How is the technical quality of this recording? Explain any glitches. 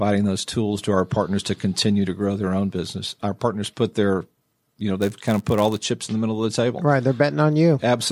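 The recording has one glitch, near the end. From 5.0 to 5.81 s there is a block size mismatch (padded). One stage hands over blocks slightly shorter than the next stage expects. The missing part of each block is filled with silence. That tiny gap repeats with every block, so the speech picks up a buzz at about 99.6 Hz. The speech also runs marginally slow, at 0.996 of normal speed, while its timbre stays the same.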